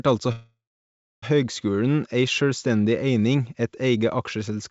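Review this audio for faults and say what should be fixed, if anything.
A call audio freeze runs from 0.32 s to 1.24 s. The last sound is drawn out into a fading buzz that gives way to about 0.66 s of silence, and then the speech picks up exactly where it broke off, so everything after arrives roughly 0.9 s late. Because nothing is skipped, this differs from packet loss, where audio goes missing. Packets stalling until the jitter buffer ran dry is the likely cause. An adaptive jitter buffer with more headroom would prevent it.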